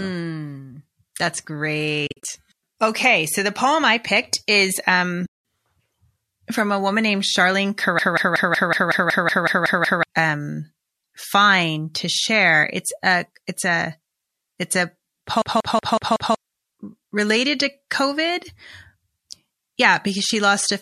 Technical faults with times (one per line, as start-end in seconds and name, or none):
2.06-2.25 AAC frame loss with muting
5.25-5.34 AAC frame loss with muting
7.99-10.03 system hang loop
15.42-16.35 system hang loop